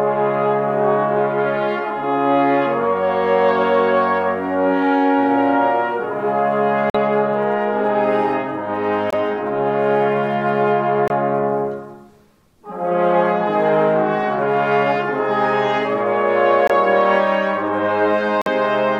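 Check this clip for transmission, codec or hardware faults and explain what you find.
Five short holes of corrupt frame muted, at 6.90–6.95, 9.10–9.14, 11.08–11.10, 16.67–16.72 and 18.42–18.48 s, lasting 24 to 60 ms. Damaged compressed frames were rejected by the decoder and replaced with abrupt silence, and the timing stays intact. Unlike concealment, nothing fills the gaps, and unlike a skip, no audio goes missing from the timeline.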